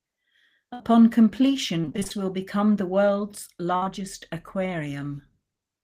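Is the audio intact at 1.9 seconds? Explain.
No. From 1.81 to 2.12 s, just before "will become the world's", the audio suffers repeated packet loss (robotic sound). Packets went missing or arrived too late eight times in quick succession, the longest hole about 27 ms, and the receiver covered each one by stretching the last sound it had. About half of that span is patched-over material, so the speech turns choppy, with fragments dropping out.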